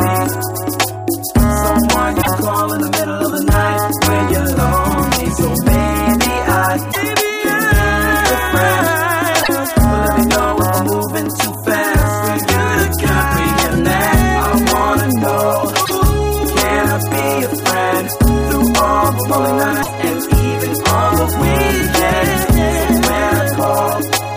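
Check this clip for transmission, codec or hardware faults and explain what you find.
There's one recurring fault: damaged data in a compressed stream, five short bursts at 2.18–2.28, 6.89–6.97, 9.39–9.49, 15.82–15.91 and 19.79–19.89 s. Each is a corrupted patch the decoder misreads before resyncing to the next frame, heard as a brief chirp or blip under a tenth of a second.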